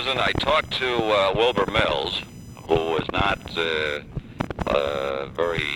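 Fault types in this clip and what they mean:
Computer activity noise: load changes in the processor, graphics card or mouse disturb the shared audio ground, leaving a buzzy, chirping whine near 1 kHz roughly 30 dB below the sound throughout. It follows the computer's activity rather than the sound, and its pitch sits well above the steady 50 or 60 Hz of mains hum.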